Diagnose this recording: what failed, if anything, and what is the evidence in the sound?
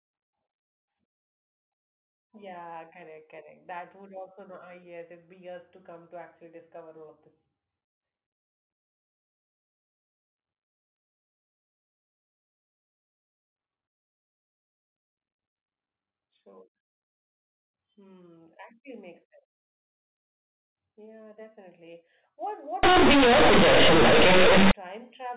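At the sample-format conversion stage, companded audio was read as linear from 22.83 to 24.71 s: the telephone-band stream, which points to mu-law bytes, was passed out as plain 8-bit samples without expansion. Every sign change then swings the waveform across roughly half the output range, so soft and loud speech come out equally huge and badly misshapen. The result is a sudden burst of very loud, buzzy distortion with heavy noise filling the gaps, against the narrow sub-4 kHz sound of the G.711 telephone coding around it.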